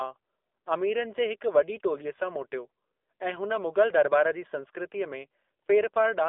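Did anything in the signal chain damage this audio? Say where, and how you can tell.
Yes. The damage is at the codec stage and runs through the whole clip. The speech is confined to a telephone band of roughly 300 Hz to 3.6 kHz, with nothing above 4 kHz, and it has the buzzy, synthetic texture of the AMR narrowband mobile codec at a low rate, which fits AMR-NB at around 7.4 kbps. At that rate the vocal-tract model gets very few excitation pulses per subframe, so the codec artefacts are plainly audible.

The network stage adds AMR bit errors from 5.43 to 5.50 s. For about 70 ms the speech keeps roughly its pitch and level but turns hoarse and gargly, with about six frames corrupted. Flipped low-priority bits passed the checksum on the protected bits, so the decoder used the frames as received and placed pulses and fine gain and spectral values wrongly. The error rate fits a few percent.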